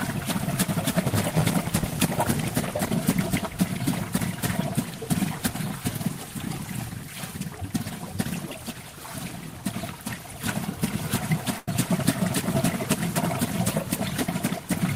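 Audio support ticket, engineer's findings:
Buzz at 86.1 Hz, 1.02–2.88 s; sound runs slow at 0.938x, timbre unchanged. Block size mismatch (padded): short blocks zero-filled, fits 512-sample reads.

Sound held and fading at 11.58–11.68 s, about 90 ms skipped on resume. Burst of packet loss: receiver concealment extended last audio, then jumped ahead.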